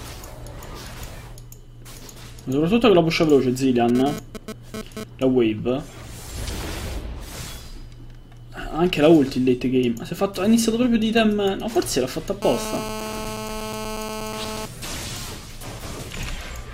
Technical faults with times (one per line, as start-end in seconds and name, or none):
3.89-5.04 GSM phone buzz
12.42-14.66 GSM phone buzz